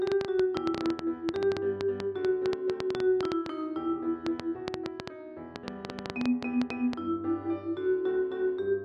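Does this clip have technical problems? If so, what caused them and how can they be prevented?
Yes. A train of clicks runs from 0.07 s to 6.94 s. It consists of around fifty similar, unevenly spaced pulses at about 7.4 per second, peaking roughly 20 dB above the sound. The likely cause is nearby interference or a faulty connection or power supply. Shielded cabling, distance from noisy equipment and a stable interface prevent it.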